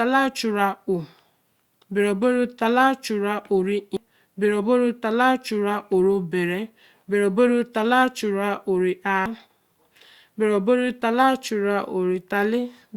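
Damaged data in a compressed stream occurs at 3.97 s and again at 9.26 s in this speech. Corrupted bytes make the decoder misread those frames and lose sync while it hunts for the next valid frame header, leaving a brief chirp or blip each time.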